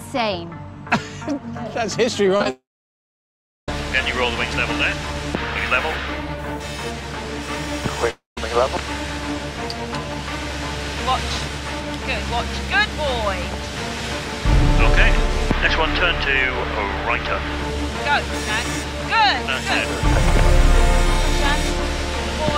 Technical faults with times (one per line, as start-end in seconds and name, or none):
2.36-2.46 short concealed packet loss
2.50-3.69 long network dropout
8.11-8.38 long network dropout